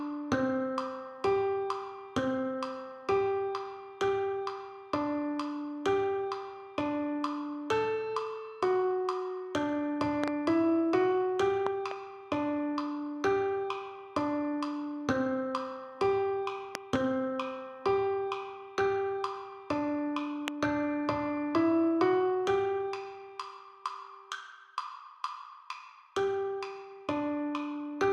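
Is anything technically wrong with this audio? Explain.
Yes. A loud pop occurs four times, most likely from a brief voltage step or pulse, such as a connector, switch, static discharge or driver glitch, entering the signal chain. The downstream circuitry shapes each jolt into a sharp transient. Double pops sit at 10.24–10.30 s and 11.67–11.93 s, peaking about 15 dB above the sound, and at 16.75–16.98 s, about 20 dB above. A single pop at 20.48–20.50 s also peaks near 20 dB. The audio continues underneath each one.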